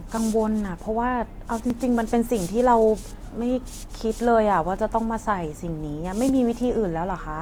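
A click recurs at a steady 1.53-second spacing from 0.18 s to 6.29 s, about five in all, sitting on the speech. These are likely clock drift buffer slips: two clocks differ by several hundred parts per million, so a few dozen samples are periodically dropped or repeated.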